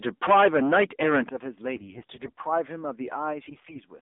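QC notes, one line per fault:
Throughout: AMR narrowband mobile codec. Nothing above 3.6 kHz or below 250 Hz, with a buzzy, synthetic vocal-tract texture that points to a low mode around 7.4 kbps, not simple lowpass filtering.
1.29 s: microphone volume stepped down. The whole signal, voice and background together, drops by about 10 dB in one step, likely an automatic input-gain cut rather than a fade.
1.76–2.44 s and 3.48–3.82 s: AMR bit errors. Pitch and level hold but the voice turns hoarse and gargly as corrupted frames misplace excitation pulses, harsher in the second run.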